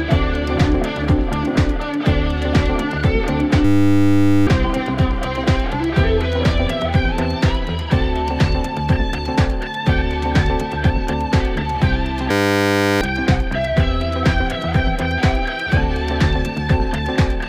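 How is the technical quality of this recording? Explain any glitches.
The recording has two glitches, both a system hang loop. From 3.65 to 4.47 s and from 12.31 to 13.01 s, the system froze while the hardware replayed one 10 ms buffer. The result is a steady 100 Hz buzz, and roughly 0.7 s of audio goes missing each time.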